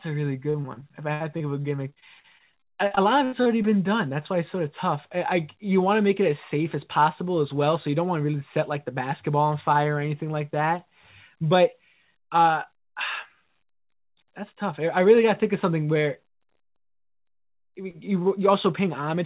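From 0.5 to 3.73 s the speech suffers repeated packet loss (robotic sound): 24 short dropouts, the longest 76 ms, are patched by stretching the preceding sound, giving a choppy quality with pieces missing. A spectrogram shows smeared, repeated harmonic blocks and breaks, all under a 4 kHz ceiling.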